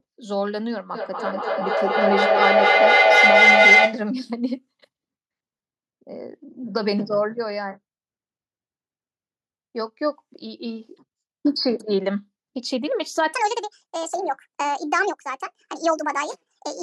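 From 0.95 s to 4.08 s there is a feedback howl. A tone near 2 kHz rises over the speech and peaks about 9 dB above it. It pulses at roughly a fifth of a second. Two devices in the same room were probably on one call. Sound from one loudspeaker reached the other microphone and looped back louder each trip. The loop favoured that narrow band, so the ringing grew instead of dying. It stops once the loop is broken.

From 13.33 s to the end, at 16.82 s, the speech plays 1.5 times too fast. The voice sounds high and hurried. Its pitch sits about seven semitones above the earlier speech, and its timing is compressed by the same ratio. Speed and pitch shift together, so no pitch correction was applied. The likely cause is a player or editor running this section on the wrong clock.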